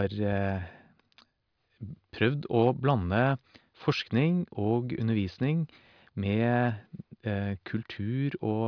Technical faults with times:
none

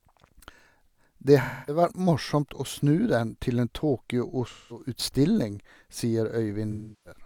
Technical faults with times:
1.41-1.82 AAC frame loss with concealment
4.47-4.88 AAC frame loss with concealment
6.71-7.20 AAC frame loss with concealment

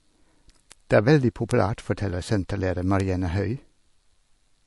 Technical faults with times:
0.00-4.67 MP3 compression
0.72 bit error spike
1.51 bit error spike
3.00 bit error spike

